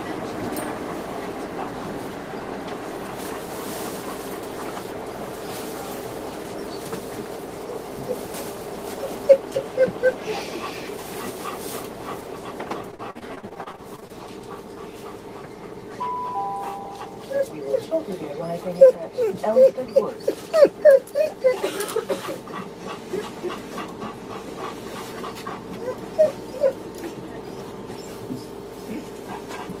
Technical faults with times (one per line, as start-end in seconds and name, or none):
12.91-14.11 repeated packet loss (robotic sound)